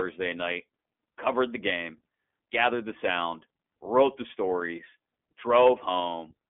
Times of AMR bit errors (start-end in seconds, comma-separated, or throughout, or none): none